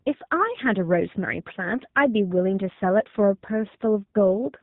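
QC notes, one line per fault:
throughout, G.729 codec: the speech sounds plainly rough and synthetic, with nothing above 4 kHz. That fits an 8 kbit/s VoIP coder rebuilding the speech from a vocal tract filter, pitch predictor and a few pulses per frame.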